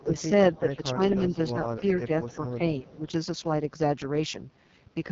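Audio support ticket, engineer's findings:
AMR wideband (HD Voice) codec, whole clip. Speech rough and raspy throughout. Band ends at 7.2 kHz. Top band is noise-filled rather than real speech detail. Heavy coding damage fits the 6.6 kbit/s mode, the lowest AMR-WB rate. Vocal tract model runs short of bits, so texture turns gritty.

Speech suppressed in double talk, 0.0–0.16 s and 1.8–2.32 s. Level dips about 10 dB, roughly 150 ms of sound affected in each span. Likely echo canceller mistaking near-end speech for loudspeaker echo during overlap, ducking both.

Echo leak, 0.17–0.22 s. Faint delayed copy, about 25 dB under the speech, trailing by 286 ms. Brief scrap only. Likely far-end loudspeaker pickup not fully cancelled and sent back down the line.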